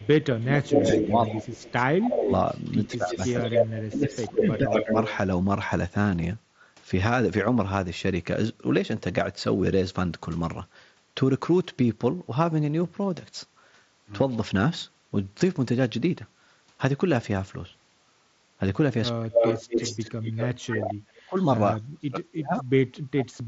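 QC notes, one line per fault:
0.0–2.3 s, speech suppressed in double talk: sound dips and chops for about 1.5 s, down roughly 25 dB at worst, likely the echo canceller ducking while both ends talk.
0.4–5.17 s, echo leak: a second copy trails about 156 ms behind, roughly as loud as the original, likely loudspeaker pickup the far-end canceller didn't remove.
2.87–4.95 s, speech suppressed in double talk: a milder round, about 1 s of dips reaching roughly 15 dB, likely the canceller turning down both sides during overlap again.
19.17–19.59 s, speech suppressed in double talk: a short, near-total cut, about 40 dB down for around 0.3 s, likely the canceller clamping hard on overlapping talk.
19.34–20.79 s, echo leak: the delayed copy returns, now about 222 ms late and roughly level with the sound, likely the same uncancelled speaker-to-mic path.
20.62–23.48 s, speech suppressed in double talk: choppy gaps add up to about 1.5 s, some roughly 40 dB deep, likely heavy ducking on double talk running to the end.
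21.39–21.46 s, echo leak: a brief, very faint 222 ms echo, about 35 dB under the sound, likely a small bit the canceller missed.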